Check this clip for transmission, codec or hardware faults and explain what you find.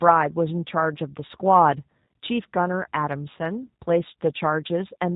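The whole clip carries G.729 codec damage, plainly audible from start to finish. The speech is band-limited with nothing above 4 kHz, and it has a rough, slightly synthetic texture that fits an 8 kbit/s codec. The decoder rebuilds each 10 ms frame from a vocal tract filter, a pitch predictor and a few pulses, so the fine detail of the waveform is lost. A plain low-pass filter would only dull the sound. What marks this as a codec is the buzzy, artificial graininess layered over the speech.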